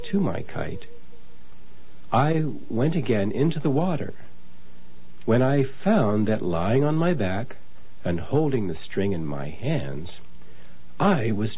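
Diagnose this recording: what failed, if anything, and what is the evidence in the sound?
Nothing failed; no faults heard.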